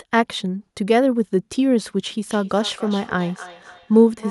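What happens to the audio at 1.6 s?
At 1.6 s the speech continues without any audible fault; the audio is intact at that moment.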